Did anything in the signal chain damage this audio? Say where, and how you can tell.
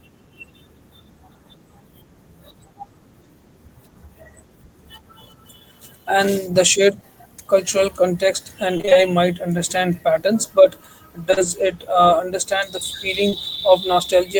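Yes. Repeated packet loss (robotic sound) at the network stage, 8.77 to 8.97 s, after "shared cultural context and". Five short gaps get patched, so half that stretch sounds choppy and robotic.

Short concealed packet loss, also network, from 11.31 to 11.42 s, after "might understand patterns but", and 13.30 to 13.34 s. Each 20 ms hole is filled by continuing the last sound, leaving brief smears.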